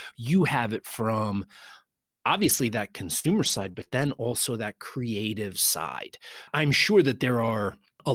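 A lost packet rebuilt from error correction affects this speech recording from 2.37 to 2.59 s. About 120 ms of sound, consistent with roughly six separate lost packets, was replaced by the low-bitrate backup copies carried in the following packets, so nothing drops out, but that stretch sounds rougher and grainier. Repeated packet loss with a robotic sound follows from 3.19 to 4.20 s, just before "that creative side". Five separate holes, the longest 42 ms, were patched by stretching the preceding sound for 129 ms in total, while 120 ms is simply missing, leaving choppy speech with pieces missing across roughly 400 ms of reconstructed audio.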